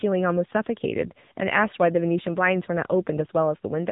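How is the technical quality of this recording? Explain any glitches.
The speech sounds muffled and thin throughout, with a buzzy, plainly synthetic edge. Nothing above about 3.8 kHz survives. This is the AMR narrowband mobile codec: 8 kHz sampling, a vocal-tract model rebuilt from few pulses, and a low mode, which fits a rate near 8 kbps.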